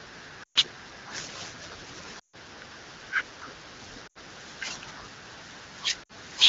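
Lost AMR speech frames: radio errors corrupted frames, so the decoder repeated its last good pitch and vocal tract settings at falling gain. At 0.43–0.58, 2.19–2.36, 4.07–4.18 and 6.03–6.12 s, the speech drops to near silence within two frames and returns briefly rough.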